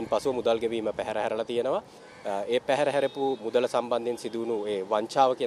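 Two device clocks likely drifting about 150 ppm apart cause clock drift buffer slips, heard as roughly four brief clicks every 1.37 s from 1.3 s to 5.4 s.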